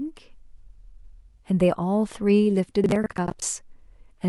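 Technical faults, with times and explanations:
0.94 to 1.13 s, frames out of order: a brief garbled flutter, as two adjacent blocks of about 93 ms each play in swapped order. That length fits runs of four frames decoded in the wrong sequence. No time is lost.
2.84 to 3.42 s, processor overload crackle: a gritty, tearing crackle rides on the speech for just over half a second. The processor missed a string of audio deadlines, and each miss replayed a scrap of stale audio with hard edges. The texture points to buffers of roughly 20 ms, around ten of them missed.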